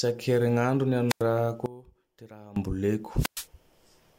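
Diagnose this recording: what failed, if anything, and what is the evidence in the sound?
The wireless link is dropping out, and these are classic wireless microphone squelch dropouts. At 1.09 to 1.22 s and again at 3.16 to 3.47 s, hiss swells, then the receiver's squelch mutes the output for about 93 ms and 111 ms as the FM signal fades, before speech returns.

Between 1.66 and 2.56 s the speech falls by about 19 dB to a faint copy. The likely cause is one channel inverted somewhere in the analogue wiring, so when the two channels are summed to mono, the centred speech they share cancels and only the small difference remains.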